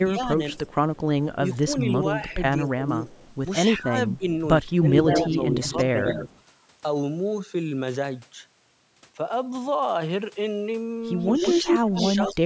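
Speech suppressed in double talk from 0.02 to 2.88 s: the speech dips in pieces, about a second in all and by up to about 15 dB, likely because an echo canceller couldn't tell its own talker from the far side and turned both down. An echo leak runs from 0.67 to 6.41 s, a copy delayed 191 ms and only about 5 dB below the speech that the canceller likely failed to remove. Suppression returns from 3.79 to 5.36 s, about half a second of dips. A second echo leak from 11.21 to 12.34 s repeats the speech 157 ms late at about equal level, while suppression from 11.8 s to the end cuts the speech by up to about 20 dB.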